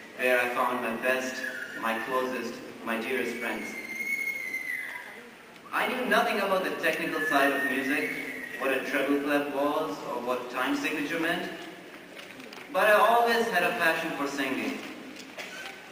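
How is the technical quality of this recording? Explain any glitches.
No technical faults can be heard anywhere in the recording.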